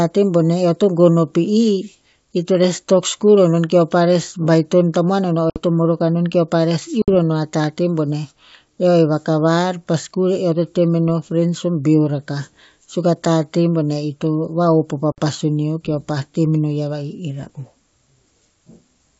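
Packet loss on an ADPCM call hits the speech three times: at 5.50 to 5.61 s just after "tamuan o no o", at 7.02 to 7.09 s, and at 15.12 to 15.20 s between "ito vahop o pa" and "pasun neo keo pah". Each time about 60 ms, a few packets' worth, drops out to a hard-edged silence. Because the decoder's adaptive predictor and step size no longer match the sender's, the speech comes back slightly distorted. This settles within tens of milliseconds as the decoder resynchronises. Around these gaps, the G.722 wideband coding sounds clear up to about 7 kHz, which fits its 64 kbit/s mode.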